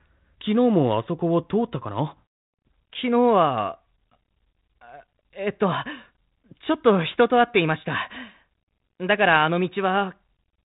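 Nothing stood out on listening to this speech recording, which comes through a G.726 ADPCM telephone path at 32 kbit/s.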